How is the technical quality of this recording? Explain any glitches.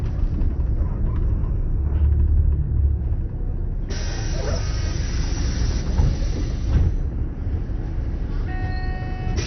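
The technical quality is poor throughout. From start to finish the sound is dull, with a gurgling, granular grain, likely from heavy MP2 compression at a low rate around 48 kbps. Layer II's 32 sub-bands were starved of bits, so upper bands were dropped and the rest coarsely quantised. A spectrogram shows a hard ceiling near 6.2 kHz with flickering, blocky patches below it, while the waveform looks normal.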